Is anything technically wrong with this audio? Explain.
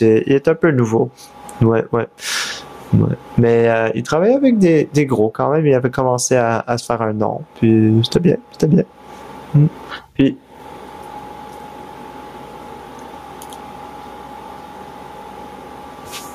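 Yes. Throughout the speech there is gain pumping. The gain swings by roughly 25 dB, so loud and soft passages sit unnaturally close in level and the delivery sounds squashed. The likely cause is input gain set far too high, with a fast limiter or compressor clamping down on each peak. On a waveform the peaks look flattened to a near-constant ceiling.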